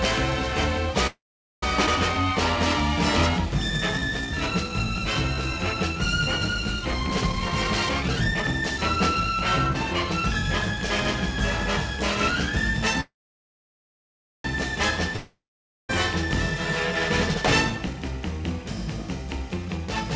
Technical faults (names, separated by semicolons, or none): call audio freeze; skip ahead; jitter buffer slow-down; jitter buffer speed-up; long network dropout